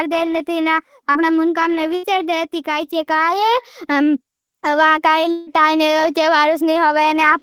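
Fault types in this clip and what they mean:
Short concealed packet loss: Around 1.11 to 1.18 s, a few hundredths of a second of speech arrived too late to decode. The receiver extended the preceding sound for about 34 ms and blended back, leaving a brief smear where roughly 40 ms is missing.
Burst of packet loss: From 1.95 to 2.06 s, several consecutive packets were lost. The receiver carried the last sound forward for about 80 ms while fading it. Speech resumes with about 80 ms absent.
Long network dropout: Between 5.31 and 5.50 s, the prior sound is stretched and faded for about 160 ms. It never drops to silence before speech returns, with about 160 ms gone. The likely cause is a longer interruption in incoming network audio.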